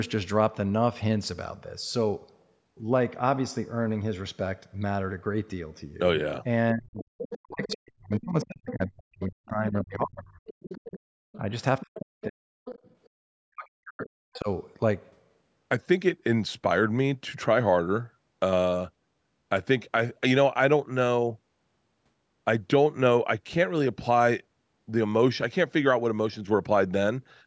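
From 6.73 to 10.4 s the speech is suppressed in double talk, dipping by up to about 40 dB over roughly 3 s in total, likely because the echo canceller could not tell the local talker from loudspeaker echo and attenuated both. Within that span, from 7.0 to 7.75 s and 8.42 to 8.73 s, the other side's voice leaks through at about 15 dB below the speech, likely residual echo the canceller failed to remove. Leakage returns from 10.47 to 12.91 s at the same level, overlapping further suppression from 11.36 to 12.47 s (roughly half a second affected). Suppression recurs from 13.33 to 14.48 s (about a second affected), and a brief scrap of leakage appears at 14.34 to 14.39 s, about 25 dB down.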